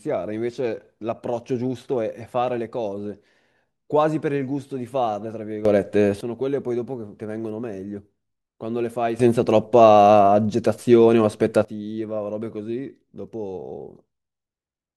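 At 5.65 to 6.21 s and again at 9.20 to 11.65 s, the speech and its background noise jump up together by about 12 dB, then drop back. The sudden gain jump, likely an unramped gain setting, differs from compressor pumping because the change is instantaneous, not a gradual swell.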